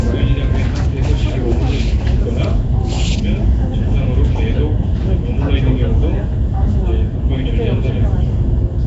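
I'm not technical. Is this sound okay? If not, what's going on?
No. Nellymoser compression is audible across the whole clip, from start to finish. The sound has a rough, hissy haze and a smeared, underwater quality, and everything above about 7.7 kHz is missing, so it lacks crispness. The likely cause is the old Flash-era Nellymoser Asao codec, which squeezes audio into small chunks with very few bits. Weak frequency bands get no detail and are filled in with noise, which creates that grainy halo.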